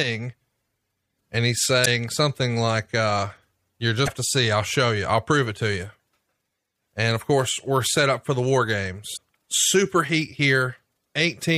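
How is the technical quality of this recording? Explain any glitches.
The speech is marred by three short glitches. Damaged data in a compressed stream causes brief glitches at 1.82 to 1.87 s, 4.04 to 4.10 s and 9.13 to 9.18 s. Corrupted bytes make the decoder misread frames and lose sync until the next valid header, producing a chirp, squawk, click or short hole of about 50 ms each time.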